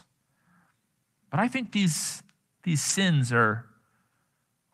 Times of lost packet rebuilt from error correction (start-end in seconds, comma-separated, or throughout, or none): 1.65-1.83, 2.89-2.91